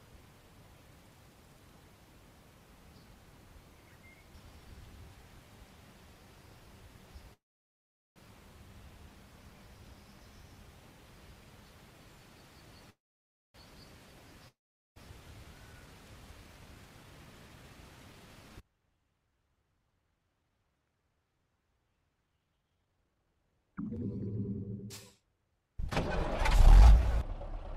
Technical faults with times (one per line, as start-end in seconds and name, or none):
7.33-8.18 call audio freeze
12.90-13.56 call audio freeze
14.48-14.98 long network dropout
16.59-21.17 jitter buffer speed-up
25.20-25.61 jitter buffer speed-up